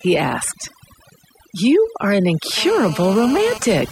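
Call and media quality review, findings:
Overdone noise removal, whole clip: background pushed down, breaking into twinkling specks. Noise suppressor set too aggressive, zeroing bands near its noise estimate along with quiet speech detail. The specks in the pauses set it apart from plain low-pass dullness.

GSM phone buzz, 2.58 to 3.58 s, right after "are an": hard raspy buzz at 217 Hz with dense harmonics, about 13 dB below speech, steady throughout, consistent with an active call. A nearby 2G handset's bursts are being rectified in the analogue audio path. The 217 Hz rate rules out mains hum.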